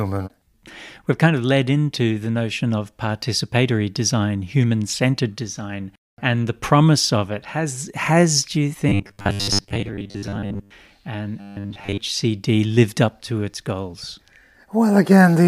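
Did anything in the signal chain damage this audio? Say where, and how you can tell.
Yes. Robotic sound from repeated short buffers occurs at 8.89–10.71 s and 11.41–11.99 s, turning speech into a rigid 100 Hz buzz. A starved driver buffer is likely looping 10 ms chunks over most of the real audio. The spectrogram shows fixed 100 Hz harmonic lines, and the waveform shows identical repeating cycles.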